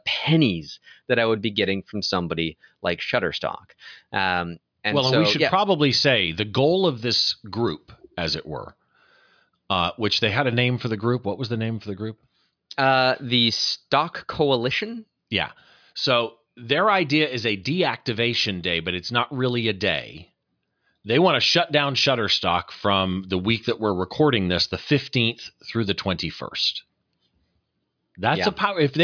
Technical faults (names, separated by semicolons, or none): none